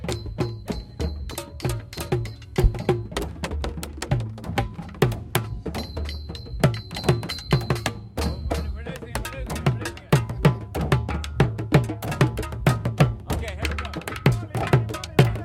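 No technical faults can be heard anywhere in this recording of sounds; the signal holds steady and intact throughout.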